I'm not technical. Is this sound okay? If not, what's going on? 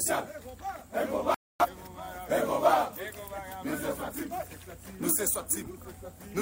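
No, there's a digital broadcast dropout: from 1.34 to 1.67 s the receiver lost the signal and muted, so about a quarter second of sound is simply gone.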